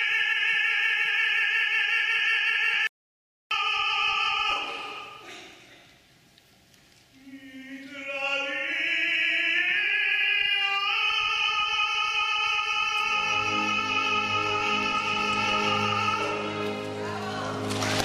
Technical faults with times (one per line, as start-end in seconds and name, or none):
2.87-3.51 audio dropout to silence